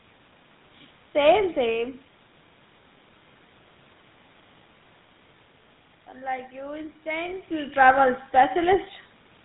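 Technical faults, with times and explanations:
Throughout, GSM full-rate codec. The speech has a plainly audible buzzy, gravelly roughness and nothing above 4 kHz. The codec models the vocal tract and drives it with evenly spaced pulses, keeping one excitation sample in three. This fits a 13 kbps full-rate stream.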